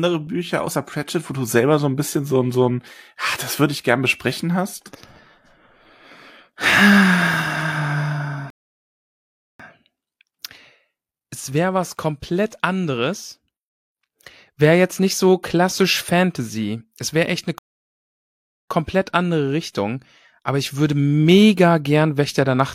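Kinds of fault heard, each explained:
Rebuffering stall: the player ran out of downloaded audio and paused, so speech halts at 8.50 s and at 17.58 s, after "wäre echt eine", for about 1.1 s each, then resumes exactly where it stopped. The waveform shows flat silent gaps; the spectrogram shows blank vertical bands.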